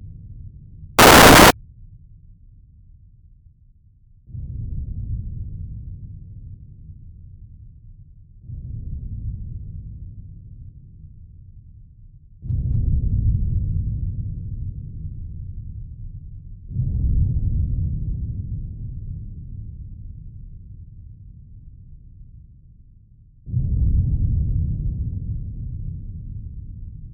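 From 0.99 to 1.51 s the samples are built from the wrong bytes: misassembled low-order bits dominate each value, producing a half-second burst of loud, harsh broadband noise.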